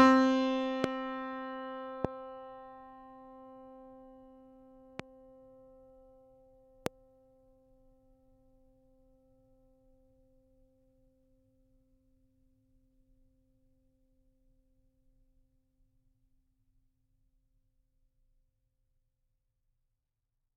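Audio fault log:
0.84–0.86, 2.05–2.07, 5.00–5.02 and 6.86–6.89 s, loud pop: four single sharp pops, each about 20 ms long, jumping roughly 15 to 25 dB above the music, which carries on underneath. It's likely a voltage spike, such as a switch, static or driver glitch, getting into the signal path.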